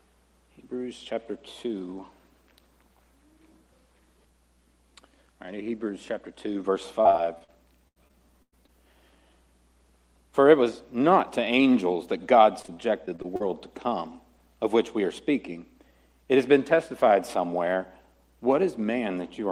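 Choppy, robotic stretches at 7.01–7.50 s, 7.88–8.70 s and 12.62–13.42 s: repeated packet loss, each hole patched by stretching the preceding sound.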